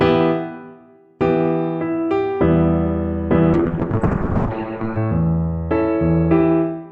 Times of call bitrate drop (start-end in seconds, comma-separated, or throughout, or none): 3.54-5.03